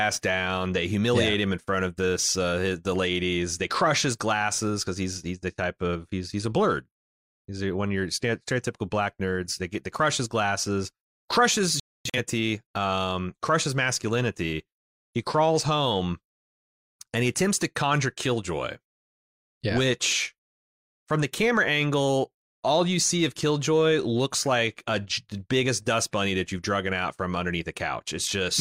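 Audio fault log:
11.80–12.18 s, digital broadcast dropout: the speech mutes in short holes spread over 341 ms, about 0.30 s missing in total and the longest gap 256 ms, consistent with several failed frames being muted by the receiver before "um crushes masculinity" resumes.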